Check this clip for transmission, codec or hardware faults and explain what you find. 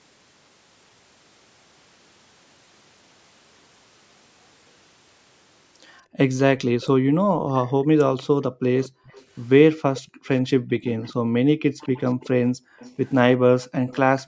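Two faults are present, both pointing to a speakerphone at one end of the call.

Background gated by the echo canceller, 6.03 to 13.88 s: while the far loudspeaker plays, the canceller clamps the microphone, so room sound dips by up to about 40 dB, for roughly three seconds in total.

Echo leak, 6.8 to 6.88 s and 8.81 to 14.21 s: a faint copy of the speech returns 234 ms late, well below the direct sound, likely loudspeaker pickup that the canceller failed to remove.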